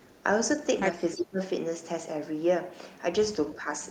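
From 1.16 to 1.39 s, speech suppressed in double talk: the level sinks about 20 dB, likely echo-canceller ducking, leaving pinched waveform and faded spectrogram.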